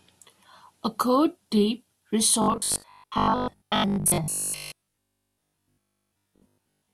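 Speech, and from 2.42 s to the end it turns into robotic sound from repeated short buffers, a rigid 50 Hz metallic buzz, likely from 20 ms chunks being looped most of the time while real audio goes missing.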